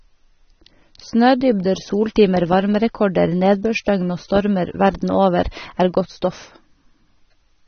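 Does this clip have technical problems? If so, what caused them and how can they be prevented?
Yes. Throughout the speech there is plainly audible damage from AAC compression: nothing is present above about 6.3 kHz, so the sound is dull, and the sibilants carry a smeared, fizzy texture. The likely cause is an AAC-LC encode at a low bitrate, which fits roughly 24 kbps. The encoder lowered its bandwidth and quantised each frame's frequency lines coarsely against its hearing model, discarding and roughening high-frequency detail. To prevent this, encode at a higher bitrate or deliver in a lossless format.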